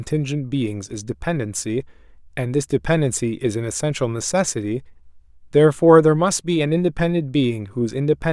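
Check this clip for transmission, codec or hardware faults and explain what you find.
Nothing turned up here: the speech comes across steady and intact, with no transmission, codec or hardware trouble to point to.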